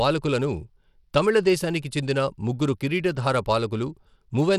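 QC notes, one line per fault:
Throughout, Bluetooth SBC compression: the speech carries plainly audible codec damage, a gritty, coarsely quantised texture from few bits spread across simple fixed sub-bands, likely SBC at a bitrate around 96 kbps. Content still reaches about 20.9 kHz.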